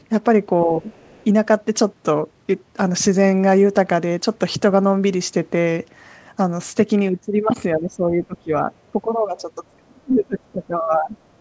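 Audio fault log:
0.0 to 0.04 s and 0.97 to 1.24 s, other side's voice leaking through: a faint second voice sits well under the speech, around 40 dB down in the first brief scrap and around 35 dB down in the second, likely loudspeaker echo that the echo canceller left in the microphone signal.
0.64 to 0.89 s, 7.76 to 8.71 s and 9.68 to 11.16 s, speech suppressed in double talk: the talker's level dips in pieces, by about 15 dB in the first two spans and about 25 dB in the last, likely because the canceller could not separate the talker from echo while both sides spoke and attenuated both.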